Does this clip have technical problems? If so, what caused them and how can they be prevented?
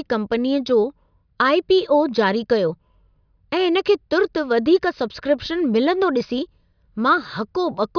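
No, this clip has no technical problems, so there is nothing that needs preventing.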